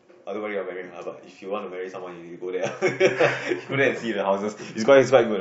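No technical faults can be heard in this speech recording. There is no point in the audio that needs a timestamp or closer attention.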